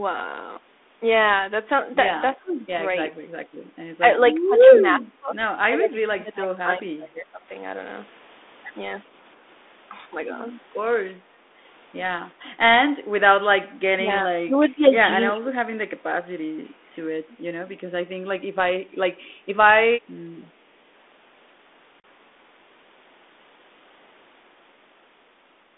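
From 2.37 to 2.65 s the speech dips by about 15 dB. This is speech suppressed in double talk: the echo canceller was likely confused by both sides talking at once and turned down the near talker along with the loudspeaker echo. On a waveform the envelope sags; on a spectrogram the upper harmonics thin out.

Inside that dip, from 2.48 to 2.53 s, a faint echo leak appears. A copy of the voice returns 368 ms late at about 30 dB below the speech, likely because the loudspeaker side's echo canceller let loudspeaker pickup through. It sounds like a brief, distant scrap. On a spectrogram it shows as a weak, smeared repeat of earlier harmonic patterns.

The same double-talk suppression returns, deeper, from 4.03 to 7.46 s and from 13.62 to 16.03 s. Drops reach about 25 dB, covering roughly 2 s and 1.5 s in total. The speech pumps down, loses its high end and breaks into pieces. The waveform looks chopped and uneven, and the spectrogram shows gaps and dark bands.

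At 22.00 s, 40 ms is lost, which fits about two packets: packet loss on an ADPCM call. The hole is hard-edged silence, a sharp-walled vertical gap on the spectrogram. The adaptive decoder is then out of step with the sender, so the speech returns slightly distorted before settling within tens of milliseconds.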